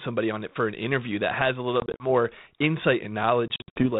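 At 1.8 s, right after "that has a little", the speech breaks up with packet loss on an ADPCM call. About 100 ms of audio drops out in hard-edged silent gaps spread over 200 ms, the longest about 40 ms. Each time it resumes, the decoder's predictor and step size are out of step with the sender's, so the speech returns briefly, slightly distorted. A worse patch from 3.48 to 3.87 s loses around 180 ms, in runs up to 60 ms. The narrowband G.726 sound suggests a 32 kbit/s link.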